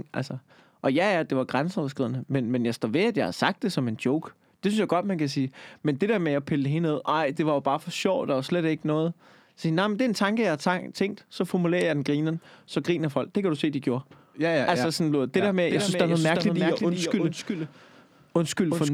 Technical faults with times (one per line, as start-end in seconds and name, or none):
15.71-18.93 doubled audio track